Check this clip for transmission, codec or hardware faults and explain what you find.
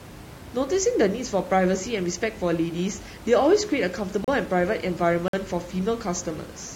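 Two brief dropouts interrupt the speech, both gaps between stream segments. At 4.24 to 4.28 s and 5.28 to 5.33 s, adjacent 1-second segments' timestamps don't meet, so the player inserts silence: hard-edged holes of 34 ms and 52 ms that even blank the room noise. No audio is lost.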